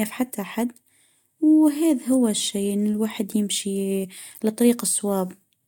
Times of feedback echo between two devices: none

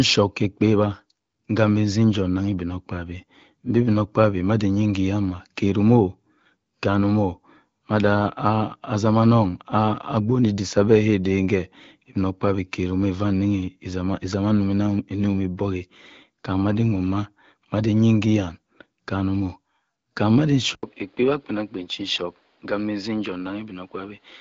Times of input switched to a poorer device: 20.75-24.40

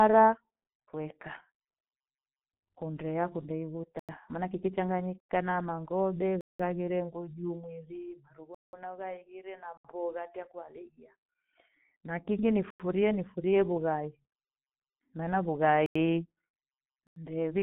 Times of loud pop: none

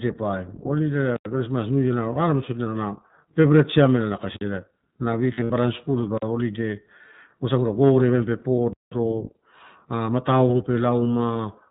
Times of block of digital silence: 4.37-4.41, 8.73-8.92

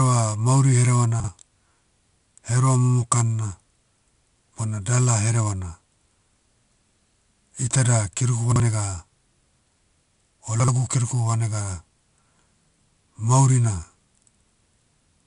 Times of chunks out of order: 1.20-1.28, 8.52-8.60, 10.60-10.68

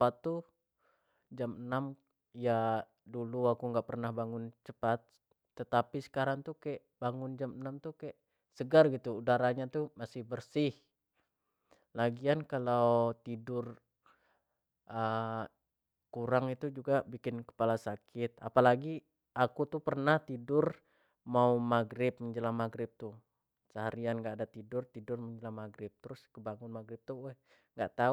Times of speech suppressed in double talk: none

